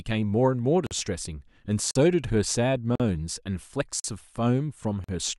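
At 0.87, 1.91, 2.95, 4.00 and 5.04 s the speech stops for 44 ms. These are gaps between chunks. The audio is delivered in one-second pieces, and silence sits at each join. Nothing is lost. Each hole recurs steadily.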